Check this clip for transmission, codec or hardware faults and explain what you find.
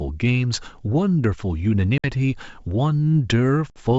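Two brief dropouts interrupt the speech, both from packet loss on an ADPCM call, carried over what sounds like full-rate G.722 wideband coding. The first runs from 1.98 to 2.05 s and the second from 3.70 to 3.79 s. Each is an abrupt silent hole of about 60 ms, after which the speech comes back with slight distortion. A few packets went missing, and the receiving decoder's adaptive predictor and step size lost track of the sender's until they resettled.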